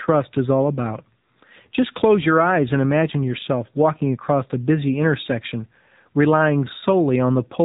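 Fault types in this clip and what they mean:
AMR narrowband mobile codec: the speech runs through a low-rate mobile phone coder throughout, with nothing above 3.8 kHz and a buzzy, synthetic edge that fits a bitrate near 7.4 kbps; unlike a simple low-pass filter, the voice sounds modelled and rebuilt, not merely dulled.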